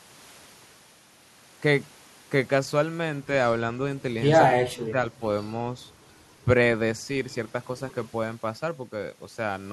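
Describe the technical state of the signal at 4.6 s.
Speech suppressed in double talk, from 4.57 to 4.97 s: the echo canceller likely mistook overlapping talk for echo, so the speech drops deeply, about 25 dB.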